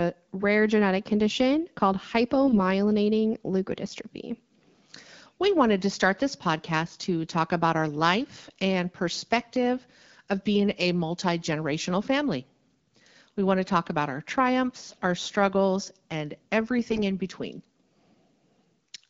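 AMR bit errors at 2.44–2.60 s, 14.87–14.98 s and 16.90–17.00 s: a few percent of weakly protected bits arrive flipped, misplacing excitation pulses, so speech briefly turns hoarse and gargly.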